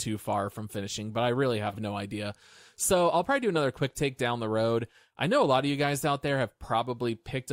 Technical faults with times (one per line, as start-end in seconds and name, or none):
1.69-1.78 frames out of order